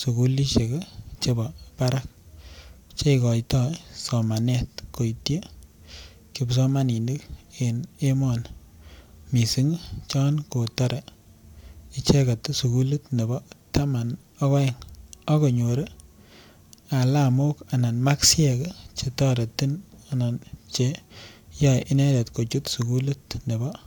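No technical faults can be heard anywhere in this speech recording, and the signal carries through without any interruption or audible damage.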